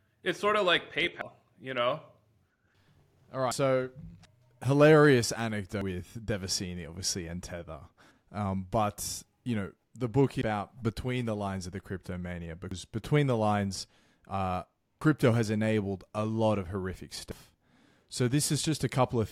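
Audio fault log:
1.21, 3.51, 5.81, 10.41, 12.71, 15.01 and 17.31 s: audio missing between chunks. The speech skips abruptly at each point, with about a fifth of a second gone and the two sides joined without a pause. This is likely a recorder dropping audio as it closes one 2.5 s chunk and opens the next.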